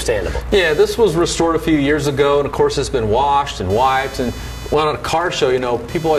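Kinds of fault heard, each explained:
Computer activity noise: from 0.52 s to the end, a buzzy chirping near 500 pulses per second sits roughly 25 dB below the sound. Processor or graphics load disturbs the shared ground. Unlike steady mains hum, it rises and falls with computer activity.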